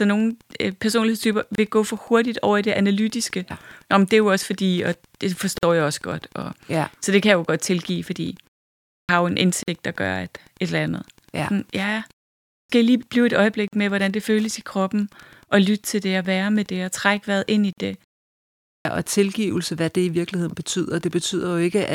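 A nearby Wi-Fi radio's signal is being rectified by the audio circuit, leaving Wi-Fi interference throughout: a faint tick every 102.4 ms, about 35 dB below the speech.

Separately encoded pieces were joined without trimming their encoder delay and padding, so a gap opens at each join every 4 s. The gaps fall at 1.55 s (28 ms), 5.58 s, 9.63 s, 13.68 s and 17.73 s (49 ms each), each a silence with smeared edges before the speech resumes.

The output device sleeps during pauses and wakes late, giving a clipped start after a pause at 8.98 s, 12.59 s and 18.75 s. Roughly 100 to 110 ms of each onset is swallowed, so the speech starts abruptly without its first sounds.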